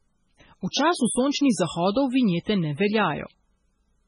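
Right from the start there's heavy MP3 compression damage, likely from a very low bitrate around 16 kbps. Nothing survives above 10.5 kHz, and weak frequency lines flicker in and out between frames, giving the speech a watery, swirly texture with chirpy sibilants. At 0.71 to 0.73 s there's a pre-echo: the codec spread its quantisation noise across the whole block, so a short hiss about 21 ms long leaks in ahead of a sharp onset, which lands soft and smeared.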